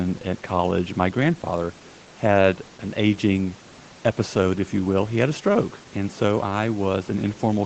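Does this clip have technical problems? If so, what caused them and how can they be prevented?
No, this clip has no technical faults. The call microphone processing keeps everything below 8 kHz, and the room noise sits about 27 dB under the speech.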